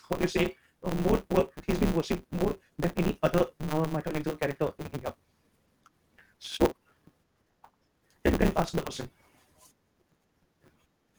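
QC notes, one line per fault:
Throughout: block size mismatch (truncated). A steady buzz at 150 Hz sits under the speech, and the talk runs about 1.6 times too fast while its timbre stays. One stage hands over longer blocks than the next stage takes in, which fits 512-sample blocks being written, so the tail of every block is discarded. Each cut lands at the block rate, producing the buzz, and the lost material compresses time while keeping the timbre.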